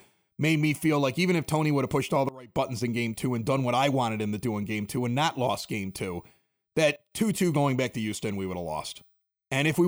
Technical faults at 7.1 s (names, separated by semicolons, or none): sudden gain jump